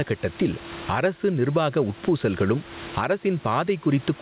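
Gain pumping throughout: excessive input gain likely drives a fast limiter on every loud syllable, so the gain swings around 20 dB.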